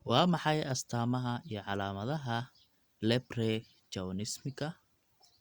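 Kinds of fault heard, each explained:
No technical faults detected.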